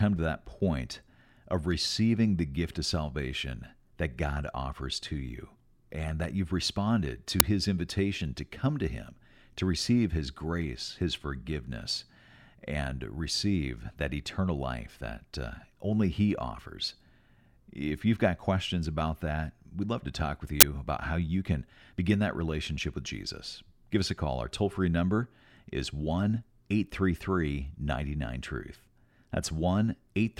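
Twice an uninitialised buffer went out to playback before any audio had been written to it, so stale memory was played as samples. At 7.4 s, between "that you've responded to" and "his invitation to come", a 5 ms loud crack cuts in, and from 20.61 to 20.63 s, after "love to talk with", a longer 20 ms burst of digital noise cuts in.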